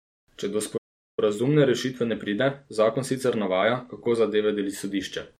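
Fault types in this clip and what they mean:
Playback stall: the speech cuts to silence from 0.77 to 1.19 s, a gap of about 405 ms, likely because the player ran short of buffered data.
Time-compressed catch-up: from 1.19 to 4.19 s the speech runs about 1.1 times fast at normal pitch, hurried by spliced, cross-faded segments.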